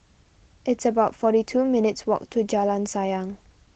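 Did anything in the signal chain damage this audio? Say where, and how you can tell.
No, nothing in the signal chain damaged this audio.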